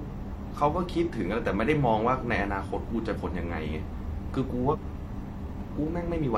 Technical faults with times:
3.11-3.17 compressed frames skipped
4.69-4.75 compressed frames skipped

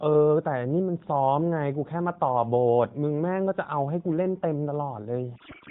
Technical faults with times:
5.36-5.70 codec payload misread

